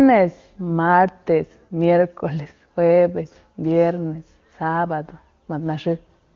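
No technical faults are audible in the speech, which is carried through the AMR wideband (HD Voice) codec with a band limit near 7 kHz and at most faint coding traces, consistent with its highest rate of 23.85 kbit/s.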